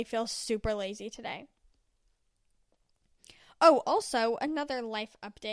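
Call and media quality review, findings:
Nothing stood out on listening to the speech in this recording.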